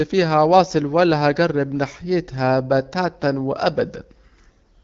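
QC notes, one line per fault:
No faults found in this speech clip. The AMR wideband (HD Voice) path at 12.65 kbit/s leaves only light coding traces, with the band topping out near 7 kHz.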